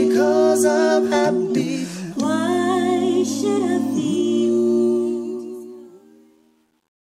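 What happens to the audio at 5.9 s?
At 5.9 s the tail of the fade-out turns gritty. This is truncation distortion on a fade, running from 4.85 s to the end and worst from 5.73 s. The fade stage keeps too few bits and adds no dither, which fits roughly a 10-bit word length. The falling waveform therefore collapses into coarse square steps.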